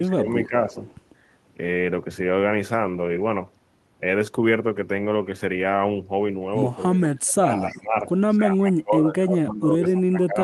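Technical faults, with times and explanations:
0.00 to 0.73 s, 6.94 to 8.06 s and 8.37 to 10.43 s, speech suppressed in double talk: the speech dips and thins in pieces. In the opening stretch, around a third of a second is affected, sinking by about 15 dB at worst. In the middle stretch, most of a second is pulled down by up to about 25 dB, and the final stretch drops by up to about 25 dB through to the end. The likely cause is an echo canceller meeting both sides talking at once: unable to tell this talker from loudspeaker echo, it turned everything down.
0.84 to 0.99 s and 7.64 to 7.81 s, echo leak: a faint, short scrap of delayed speech trails 281 ms behind the original. It is about 30 dB below the speech in the first case and louder, about 20 dB below, in the second. This is likely loudspeaker sound reaching a far-end microphone that its echo canceller failed to fully remove, so a weak copy travelled back.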